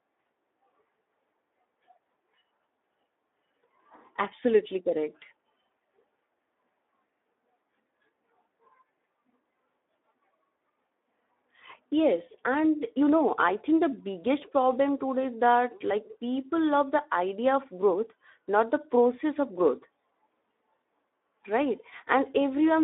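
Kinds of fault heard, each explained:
Speex codec: the speech passes through a low-rate CELP coder that has too few bits to describe the excitation, so it comes out hoarse, grainy and noisy for the whole clip, with plainly audible damage. The sound is confined to a line band of about 250 Hz to 3.6 kHz, with nothing above 3.8 kHz, and the coarseness fits a bitrate around 11 kbps. A plain telephone filter only removes the band edges, but here the roughness sits inside the passband itself.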